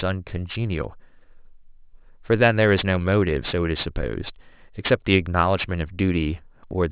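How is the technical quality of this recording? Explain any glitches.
The recording has a clear technical fault. Aliasing runs throughout: speech content above 4 kHz folds back below it, about 20 dB down, turning sibilants gritty and metallic. On a spectrogram, energy crowds hard against the 4 kHz edge, which fits a drop to 8 kHz sampling without filtering.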